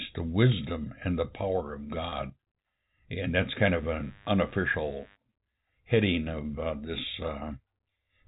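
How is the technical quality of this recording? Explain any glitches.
Two glitches stand out in this telephone-band speech, where nothing above 4 kHz comes through.

Packet loss with pitch repetition occurs from 2.10 to 2.12 s. A single lost packet left a 20 ms hole, and the receiver filled it by repeating the last pitch period of the preceding speech, tapering it off. Because the gap is so short, it doesn't drop to silence. Instead the voice briefly sounds held and slightly buzzy before normal speech resumes.

Mains buzz enters from 3.64 to 5.18 s. Sharp switching spikes from the power supply, most likely a dimmer, rectifier or unshielded cable, leaked into the signal twice per 50 Hz cycle, producing a dense stack of harmonics. Sitting roughly 30 dB below the speech, it is heard as a steady, raspy buzz underneath the voice for about a second and a half, then stops.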